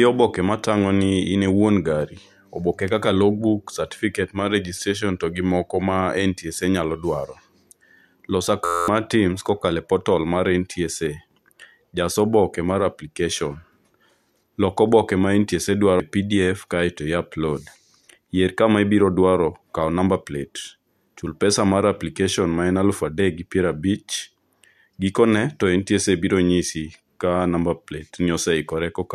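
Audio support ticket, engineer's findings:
System hang loop, 8.65–8.88 s: steady 86.1 Hz buzz, one 11.61 ms slice repeated 20 times (fits a 512-sample ring buffer). Driver/host stalled; about a fifth of a second lost. Exact repeats, not a dropout or jitter.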